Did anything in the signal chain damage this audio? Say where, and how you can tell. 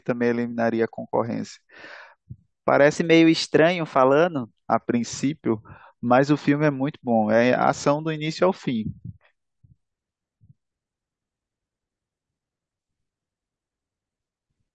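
Yes. A wrong sample rate affects the speech from 2.96 to 4.53 s at the playback stage. Speed and pitch rise together, about 1.09 times faster and 1.47 semitones higher, which fits 22 kHz material clocked out at 24 kHz without any rate conversion.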